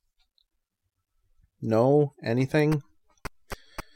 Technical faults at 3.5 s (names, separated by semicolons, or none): none